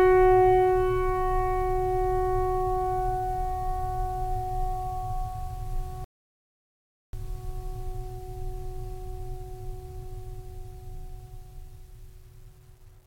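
At 6.04 s the music stops dead in mid-flow and the track falls to complete silence, with no room tone or decaying tail underneath, until it resumes abruptly at 7.13 s. This is an audio dropout to silence lasting about 1.09 s, and whatever was playing in that stretch is simply missing. The likely cause is a brief loss of the input signal, such as a disconnected device, a failed link or an accidental mute, while recording carried on writing zeros.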